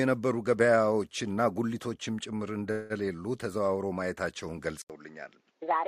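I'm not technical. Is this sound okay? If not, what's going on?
No. Two separate problems can be heard.

From 2.71 to 2.93 s there is a call audio freeze. For about 185 ms the sound stops moving forward. It stretches into a short, fading buzz instead. The likely cause is that data got held up in transit and the receiving end ran out of sound to play. When the data arrived, the audio picked up where it had left off. Nothing was lost. Everything after that point simply plays about 185 ms later.

At 4.82 s the input switched to a poorer device, most likely a different microphone or a headset's call mode. First there is a brief silence of about 80 ms. Then the sound comes back duller, because everything above about 7.6 kHz is gone. It is also a little quieter, and a faint new background noise sits underneath it. This duller sound lasts until the end of the clip.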